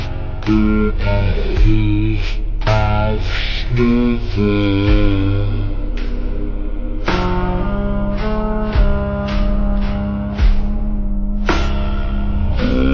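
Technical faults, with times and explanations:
Throughout, wrong sample rate: the audio runs at about 0.36 times normal speed and about 17.6 semitones low. This fits 44.1 kHz material played back at 16 kHz without conversion.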